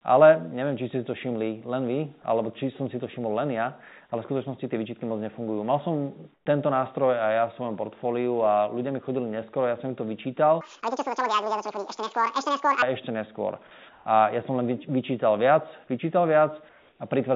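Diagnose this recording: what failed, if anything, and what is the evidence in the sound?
In three pauses the quiet background turns into a flat, featureless hiss: 6.34 to 6.46 s (about 5 dB quieter), 13.93 to 14.05 s (about 2 dB louder), and 16.69 to 16.99 s (about 1 dB quieter). This is comfort noise in place of the background, likely from discontinuous transmission in the call processing, with the receiver synthesising noise while the sender stayed silent.

From 10.61 to 12.82 s the sound rushes by at 1.9 times its speed, pitched up nearly an octave, then snaps back. Speed and pitch shifting together marks a section at the wrong speed, likely from a playback or editing stage running that stretch against the wrong clock. The G.711 call path itself worked normally.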